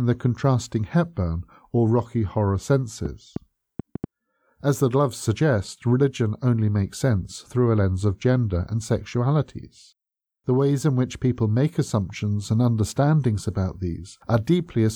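Right after "or rocky horror", from 3.06 to 4.05 s, there's a train of clicks: about five sharp, similar pops at roughly four per second, unevenly spaced and around 10 dB above the speech. It's likely interference from nearby gear or a faulty connection or power supply.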